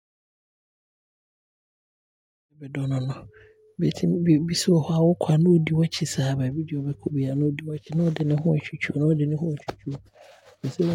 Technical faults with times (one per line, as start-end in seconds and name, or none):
none